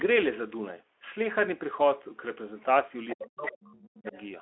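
A speech recording in which an echo canceller, likely struggling with the far end played over a loudspeaker, lets the other side's voice leak through in faint scraps at 3.08 to 3.27 s, 3.46 to 3.52 s and 4.07 to 4.21 s, roughly 15 to 25 dB below the talker. When both sides talk at once, the same canceller apparently cannot tell the talker from the echo, so speech is suppressed in double talk from 3.14 to 4.14 s: the voice sinks, dropping by as much as roughly 40 dB. Throughout, the sound stays within the narrow 300 Hz to 3.4 kHz telephone band, with light Speex coloration.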